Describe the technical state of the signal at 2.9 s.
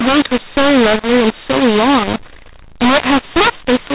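At 2.9 s you're hearing the mu-law and A-law mixed-up fault, and it runs through the whole clip, not just that moment. The speech was coded as A-law but is being decoded as mu-law, so the two companding curves don't match and sample levels get remapped wrongly: some too loud, some too soft, and the quietest ones pushed well above silence. That's why the speech sounds harsh and gritty and any pauses fill with noise. Underneath, the telephone band still tops out at 4 kHz, consistent with 8,000-sample-per-second G.711.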